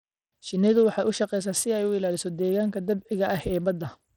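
From start to end, the speech carries plainly audible coding damage. The top end thins out and flickers in and out. A gritty, grainy noise rides on the sound, with aliasing. The likely cause is Bluetooth SBC compression at a low bit pool. The damage points to a rate near 80 kbps. SBC splits the signal into a few wide sub-bands with crude bit allocation. Weak upper bands get starved of bits. The rest are coarsely quantised.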